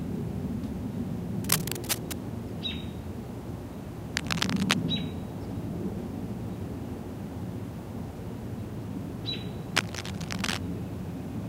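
Bursts of cable scratch noise occur from 1.44 to 2.15 s, 4.15 to 4.76 s and 9.76 to 10.59 s: dense, ragged rustling at about the level of the sound, louder in the middle burst. A worn cable or connector being moved is the likely cause.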